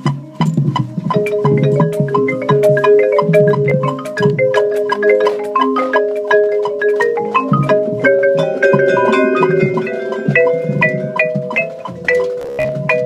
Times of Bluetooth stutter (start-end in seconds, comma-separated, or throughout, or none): 3.70, 12.41-12.73